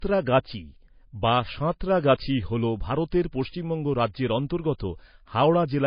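Speech throughout, with nothing above about 5.1 kHz: likely low-bitrate audio saved at a high bitrate, a cut-off pointing to a heavily squeezed MP3 first pass the re-save couldn't undo.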